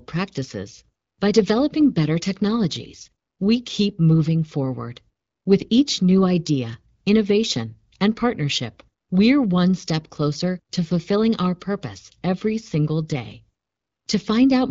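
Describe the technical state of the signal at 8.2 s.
At 8.2 s the speech is intact, with no fault, and the AMR wideband (HD Voice) coding at 12.65 kbit/s sounds clear there.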